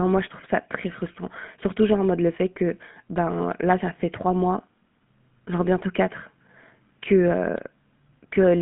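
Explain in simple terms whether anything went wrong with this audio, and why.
The whole recording, from the first second to the last, has passed through the GSM full-rate codec, the encoding used by early mobile phones. It rebuilds the voice from a simple model driven by regular pulses, which gives the speech a clearly audible buzzy, gravelly roughness. Nothing above about 3.8 kHz survives. A plain narrow telephone line would sound muffled but smooth; the grainy buzz is what points to this codec.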